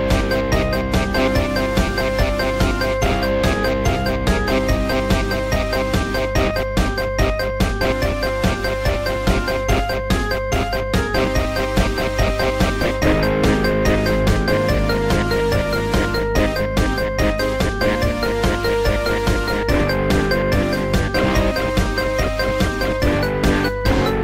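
Mains hum runs through the whole clip: a steady 50 Hz tone sitting roughly 10 dB below the audio itself. Something like a ground loop or a nearby transformer let the power line bleed into the signal path, so that low drone never lets up.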